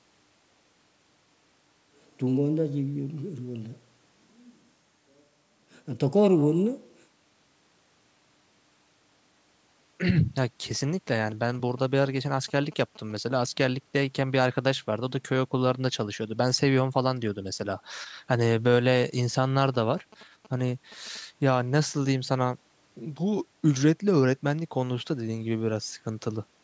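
GSM signalling bursts break into the speech from 10.75 to 13.12 s and again from 19.65 to 21.17 s. A nearby 2G phone was exchanging short radio bursts with the network, and the audio circuitry rectified them into a galloping dit-dit-dit of short buzzes repeating at about 217 Hz, sitting well below the speech level. Unlike the steady drone of an active GSM call or mains hum, each episode comes in irregular clusters and stops.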